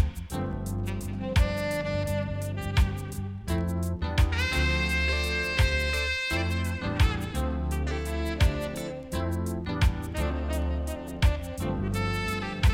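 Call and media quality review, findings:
No technical defects found; signal level, continuity and timing hold steady across the whole recording.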